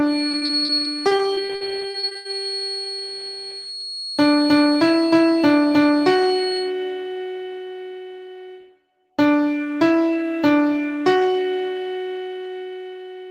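From the start to 6.73 s, a feedback whistle sits behind the sound. It is a thin, steady tone at 4.3 kHz, roughly 10 dB below the main signal, swelling and fading slowly. The likely cause is a loudspeaker-to-microphone loop held just short of runaway.

From 0.31 s to 2.27 s, repeated packet loss makes the sound robotic. Short holes follow one another closely, the longest 81 ms. Each is patched by stretching the previous sound. About a quarter of this span is concealed, giving choppy audio with pieces missing.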